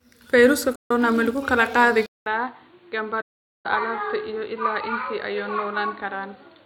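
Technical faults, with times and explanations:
0.76–0.91 s and 3.21–3.66 s, AAC frame loss with muting: the sound fades into a clean hole of about 150 ms just before "ma lagu kala qaadi", then a longer one of about 450 ms later on. The lengths fit runs of seven and 21 AAC frames. The decoder filled the missing frames with zero spectrum, and the overlapping windows taper the edges.
2.06 s to the end, input switched to a poorer device: after "ma lagu kala qaadi" there is a 200 ms silence. The audio then returns dull and boxy, with nothing above 4.5 kHz. It is around 10 dB quieter and carries a new noise floor roughly 30 dB below the signal. The likely cause is the recording moving to another microphone or a headset call profile. A simple filter would not bring the gap, level change and different background noise all at once.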